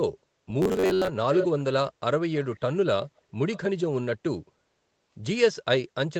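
From 0.62 to 1.08 s the speech takes on a robotic sound from repeated short buffers, a stiff metallic buzz near 94 Hz that only loosely tracks the speech. The likely cause is audio arriving too rarely, so a piece roughly 10.7 ms long is replayed in place of most of the missing signal. A spectrogram shows evenly spaced harmonics of that 94 Hz rate, and the waveform shows a short repeating pattern.

Echo leak follows, a delayed copy of the speech returning 425 ms late at 1.33 to 1.64 s, 2.38 to 2.6 s, 3.03 to 3.21 s and 3.51 to 3.58 s. The first burst is loud, about 5 dB under the speech. The others are faint, at about 25, 30 and 25 dB down. This is likely loudspeaker sound that the far end's echo canceller failed to remove. A spectrogram shows fainter repeats of earlier patterns, shifted right, inside the call band that stops at 8 kHz.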